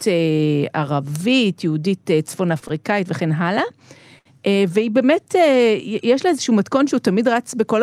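A speech clip with a short stall from a late packet, three times over: packets reached the receiver after they were due, the jitter buffer ran dry, and the receiver held the last sound until each one arrived, then resumed where it left off. The result is a briefly frozen sustain with a slight buzz or dip, about 26 ms near 2.59–2.64 s, 17 ms at 2.68–2.83 s, and a longer 68 ms stretch at 4.19–4.42 s, with nothing actually lost.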